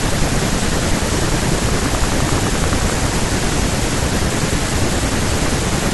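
From 1.69 to 3.08 s a train of clicks ticks at a steady 11.6 per second, likely interference; random crackle is never this even.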